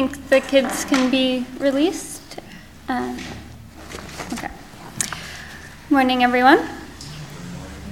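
No technical faults can be heard anywhere in the audio, with the signal staying steady and intact throughout.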